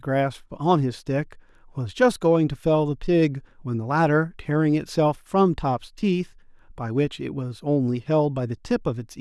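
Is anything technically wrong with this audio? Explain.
No, nothing technically wrong can be heard in this speech recording, and the signal stays intact and steady throughout.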